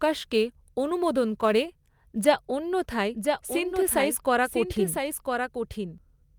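From the start to 2.29 s there is sample clock jitter. The converter's timing wanders by a few microseconds, so each sample lands slightly off its proper instant. The error scales with how fast the waveform is changing, leaving a fine hiss roughly 30 dB under the speech. It swells on loud and bright sounds and drops away in pauses. On a spectrogram it looks like a faint haze of broadband noise that appears only under energetic, high-frequency parts of the speech, with clean gaps between.

From 3.14 s to 5.98 s there is a doubled audio track. A second full-band copy of the speech runs about one second behind the original and about 5 dB quieter, likely because the same signal also arrived through a slower path and was mixed back in. It has no reverberant tail or room colouring and starts and stops abruptly. On a waveform, each syllable reappears a second later at a smaller height. A spectrogram shows the same harmonic patterns repeated, shifted right by that fixed offset.

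From 3.53 s to 3.55 s, inside the doubled section, there is a lost packet rebuilt from error correction. One 20 ms packet went missing. The decoder filled it from the low-bitrate backup copy carried in the following packet, so the sound does not break off. That brief stretch sounds rougher and grainier. On a spectrogram it is a thin vertical strip where the detail turns smeared and noisy. The waveform shows no gap or dropout.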